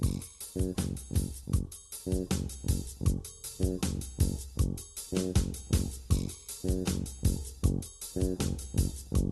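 Right through the clip there's clock drift between sender and receiver. The sending side's clock runs slow, by something like one and a half percent, so the receiver's jitter buffer keeps draining and has to pad the audio out to keep playing.

That shows up as repeated timing corrections from 1.44 s to 8.20 s. The receiver repeats little slivers at uneven spacing, so the audio plays at about 98% speed and picks up roughly a tenth of a second overall.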